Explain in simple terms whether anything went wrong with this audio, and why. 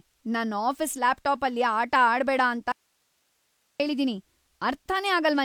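Something did go wrong. At 2.72 seconds, right after "ಆಟ ಆಡ್ಬೇಡ ಅಂತ", the speech suddenly vanishes. It returns at 3.80 seconds, so about 1.08 seconds is lost. This is an audio dropout to a faint residue. During the gap you hear only hiss, far below the normal level. The cut is abrupt, not a natural pause or fade. The likely cause is that the signal was lost while the recording path stayed switched on.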